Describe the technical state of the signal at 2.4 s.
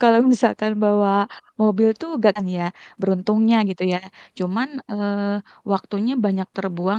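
A skip ahead sits at 2.35 to 2.37 s. Roughly 0.7 s of audio was discarded while later audio was already queued, so playback jumps straight forward with no gap filled in. The speech on either side is joined almost directly, and a chunk is simply absent.

Jitter buffer speed-up follows at 2.45 to 4.56 s. With the buffer holding more than its target, the receiver repeatedly trimmed pitch-period-length slices, removing around 150 ms in total. The speech runs at 107% speed with unchanged pitch and sounds slightly hurried.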